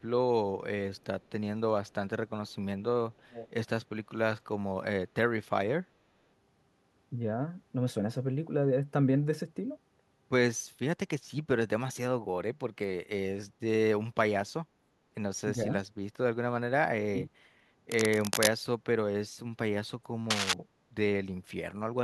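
Faint echo leak appears at 0.96, 1.21, 1.88 and 2.48 s, about 40 dB down, then louder, about 15 dB down, from 3.12 to 3.51 s. The delayed copy trails by 364 ms, likely from a loudspeaker echo the canceller missed.

Speech suppressed in double talk follows. The speech dips slightly, about 5 dB, at 15.54 to 15.69 s. It then drops deeply, around 30 dB, from 16.83 to 17.37 s, likely as the canceller ducked both sides.

Cable scratch noise adds rough rustling bursts from 17.91 to 18.52 s and 20.30 to 20.53 s. They are roughly as loud as the speech, likely from a disturbed connector.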